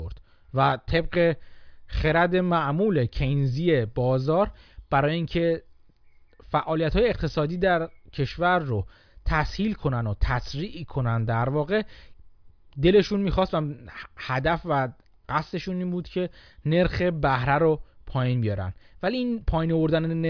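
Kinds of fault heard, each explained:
Nothing stood out on listening to this speech clip.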